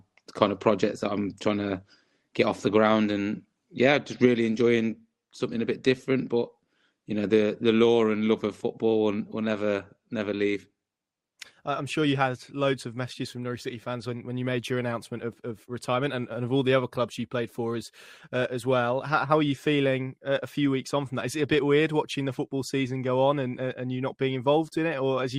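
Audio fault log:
There is no fault in this audio.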